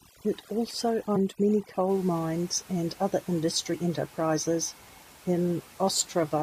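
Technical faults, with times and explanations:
0.0 to 1.9 s, overdone noise removal: the background turns near-silent and twinkling, as heavy noise reduction strips bands lying near the room noise, about 25 dB below the speech.
1.15 s and 3.73 s, damaged data in a compressed stream: each is a brief blip, as the decoder misreads corrupted frames and loses sync until it finds the next valid frame header.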